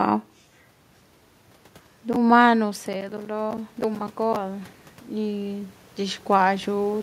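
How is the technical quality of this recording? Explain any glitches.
One glitch stands out: automatic gain rising from 2.56 s to 6.98 s. After the talker moves away at about 2.5 s, the input drops about 14 dB. The gain control slowly adds about 11 dB, swelling voice and room noise together. The waveform envelope and the spectrogram's noise floor creep upward.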